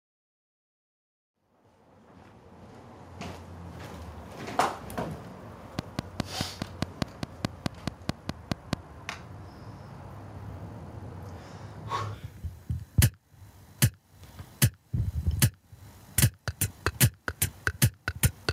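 Gain pumping runs through the whole clip: the level rises between loud moments and is pulled down on each one, a swing of about 15 dB. The likely cause is gain set too high, with a fast limiter clamping every loud peak. A waveform shows a flattened envelope.

From 5.79 to 8.74 s, a train of clicks ticks at a regular 4.8 per second, around fifteen in all, about as loud as the sound itself. Likely interference or a faulty connection. A spectrogram shows evenly spaced thin vertical lines spanning all frequencies.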